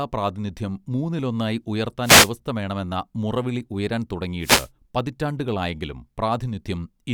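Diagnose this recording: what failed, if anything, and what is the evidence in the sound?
Two short bursts of static swish across the speech, from 2.02 to 2.31 s just after "പ്രാതിനിധ്യം മൂന്നിലൊന്നായി", and from 4.40 to 4.69 s following "വേണമെന്ന മുറവിളി ഉയരാൻ". These are wireless microphone noise hits at the analogue radio link: multipath reflections briefly cancel the FM carrier, so receiver noise rises over the voice.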